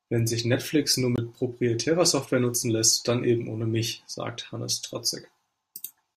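A short hole in this speech recording, from 1.16 to 1.18 s, opens and closes with hard edges. It is a block of digital silence about 21 ms long, which fits a 1024-sample output buffer left unfilled in time.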